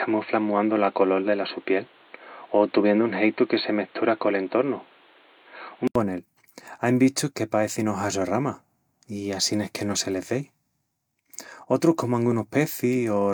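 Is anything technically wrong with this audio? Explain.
Yes. From 0.0 to 5.95 s the speech has nothing above 4.3 kHz, a different noise floor some 35 dB down, and a level offset of around 5 dB. That likely points to the input switched to a poorer device. An 80 ms silence marks the changeover, after which the wider band returns.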